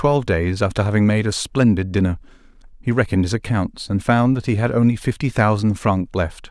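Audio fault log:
No faults heard in this clip.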